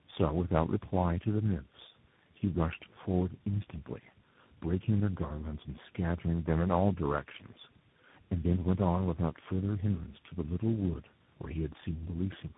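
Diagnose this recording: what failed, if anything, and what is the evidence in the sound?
Codec stage: tandem speech coding throughout the speech. It is rough, muffled and warbly beyond any single codec, which points to roughly four speech coders in a row, likely ending in CVSD. A spectrogram shows nothing above 3.8 kHz and smeared, unstable formant bands. Each coder re-encodes the previous one's errors, so the damage compounds.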